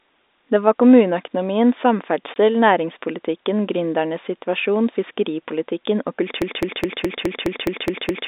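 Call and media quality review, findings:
Packet loss filled with silence, 2.34–2.36 s: a 20 ms hole in the speech with hard edges. The receiver played silence in place of missing audio; the gap length fits a single lost 20 ms packet on the G.711 A-law path.

Broken-record loop, 6.42 s to end of clip, right after "situasjon fiskeripolitikken og": a 0.21 s fragment repeats back to back, nine times. Likely cause is a stalled player, encoder or stream resending its last held buffer. The speech that should follow is lost.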